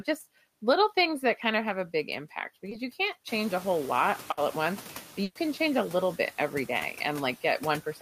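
Throughout the clip, the background between phrases sinks and rises again under the speech, and the leftover noise can warble or flutter. These are noise suppressor artifacts. The suppressor judges, frame by frame, which frequency bands hold steady noise and pulls those bands down, here by about 8 dB. Because that decision keeps changing, the residue moves with the speech rather than sitting as an even floor.

From 2.69 to 2.73 s, right after "have a big impact" and before "you can't", there is a brief smear or wobble. This is short concealed packet loss. About 20 ms of audio never arrived in time. The receiver filled the gap by extending the last sound, pitched if voiced and as shaped noise if not, then blended back into the real signal.

From 3.27 to 5.02 s, after "you can't", the room noise jumps by about 17 dB around 3.5 s. It sits about 18 dB below the speech. This room noise is part of the recording. 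What follows the jump is the noise suppressor catching up. The new, louder noise passes through with less reduction at first, then settles lower over about 1.75 s as the noise estimate adapts, ending at a cut of about 5 dB.

From 4.31 to 4.39 s there is a burst of packet loss. It is heard as a held buzz or a fading hiss, and then the audio picks up further on. About 60 ms was filled by continuing and fading the last sound, and the 60 ms of real audio it replaced is gone. A second burst from 5.23 to 5.37 s, just before "change a little bit", fills 120 ms the same way with no silence, and 120 ms of audio is missing.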